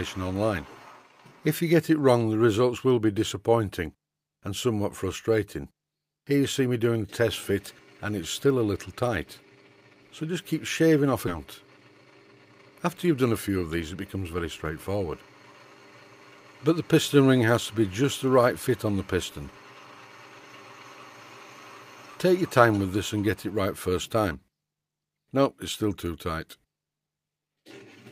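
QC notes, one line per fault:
11.27 to 11.38 s, skip ahead: playback jumps forward, dropping roughly 0.7 s of audio; waveform shows an abrupt splice with no silent gap.
13.04 to 14.44 s, jitter buffer speed-up: short pitch-period pieces trimmed repeatedly, running 109% speed at unchanged pitch; spectrogram harmonics stay level while events crowd closer.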